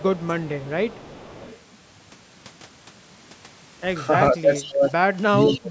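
Right at the start, 0.07 to 0.39 s, the speech dips by about 15 dB. That's likely speech suppressed in double talk: the echo canceller couldn't tell the local talker from loudspeaker echo while both sides spoke, so it turned everything down. Overlapping that, from 0.22 to 1.56 s, there's an echo leak, a faint copy of the sound trailing about 447 ms behind, roughly 25 dB under the speech. It's residue the far end's canceller likely failed to remove.

The same pair comes back later, harder. From 4.32 to 4.92 s the speech gets pushed down by up to about 25 dB, with a quick echo blip at 4.62 to 4.66 s. Then from 5.3 to 5.7 s it drops by about 30 dB, nearly cutting out, while a louder echo scrap at 5.47 to 5.59 s sits only about 15 dB below the speech, still at that 447 ms lag.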